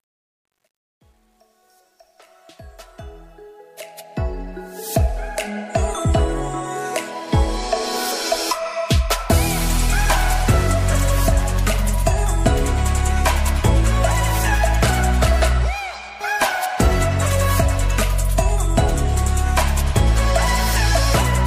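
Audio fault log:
0.00–4.86 s, truncation distortion on a fade: the fade-in, reaching full level at 4.86 s, is held to 10 bits without dither, so its quietest part, worst to 3.1 s, turns gritty. Unlike a gate, the roughness eases steadily as the level rises.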